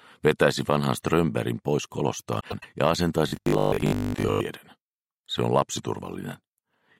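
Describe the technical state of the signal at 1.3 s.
At 1.3 s the signal is intact, with no audible fault at that moment.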